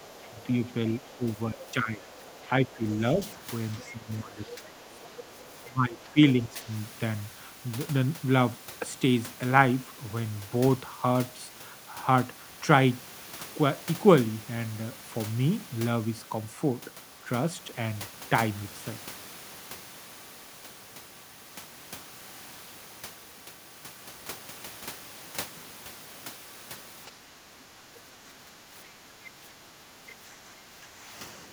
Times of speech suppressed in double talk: 0.31-3.26, 3.85-6.61, 27.08-27.47, 28.13-28.57, 29.27-31.53

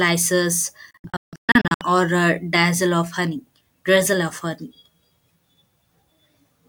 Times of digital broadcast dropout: 0.91-1.81

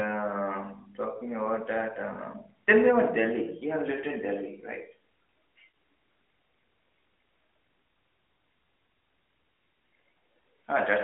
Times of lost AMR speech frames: 2.14-2.17, 5.70-5.74

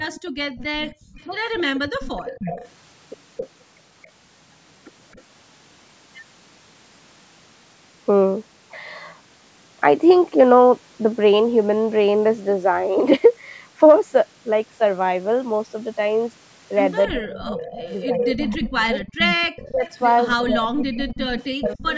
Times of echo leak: 0.00-4.09, 5.12-5.22, 17.07-21.68

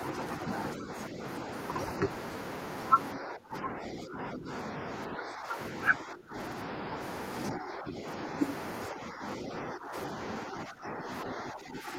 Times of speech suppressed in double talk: 0.77-1.48, 3.15-5.57, 5.93-6.96, 7.52-8.34, 8.89-11.99

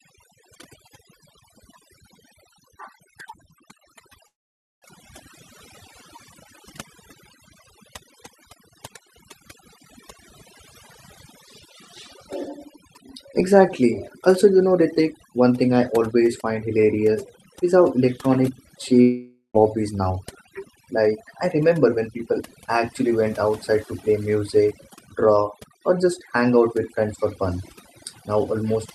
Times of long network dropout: 4.27-4.86, 19.01-19.56

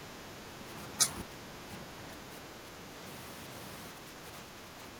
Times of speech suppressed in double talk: 1.23-1.52

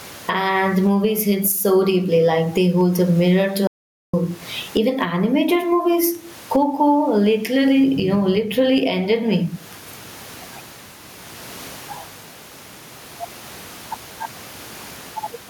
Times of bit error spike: 6.15

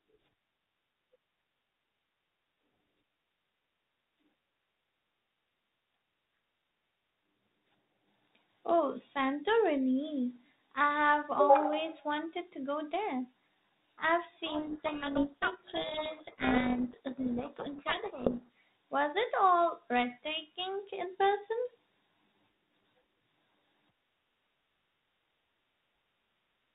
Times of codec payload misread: 14.46-18.76

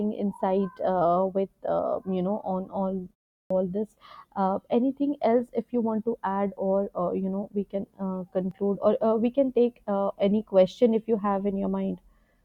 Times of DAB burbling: none

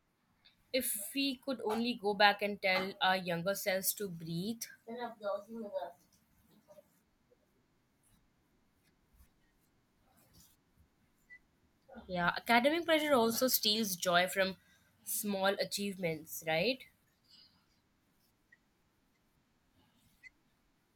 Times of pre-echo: none

